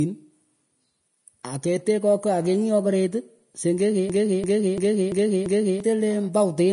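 A speech recording, likely passed through low-bitrate Vorbis compression, has nothing above 10.6 kHz, with hissy, grainy treble and blurred consonant attacks, consistent with roughly 34 kbps. From 4.10 to 5.80 s, a system hang loop occurs: the system stalled while the audio hardware replayed its buffer, so a 341 ms piece repeats five times at 2.93 Hz, fitting a 16384-sample buffer and losing about a second and a half of audio.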